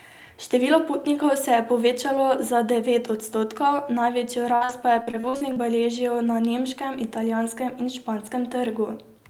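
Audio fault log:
4.55–5.58 s, repeated packet loss (robotic sound): just after "za devet odstotkov največjo", eight short gaps, the longest 55 ms, are patched by stretching the preceding sound, covering about 28% of the span. Unlike a single dropout, the holes recur rapidly, giving choppy speech with pieces missing.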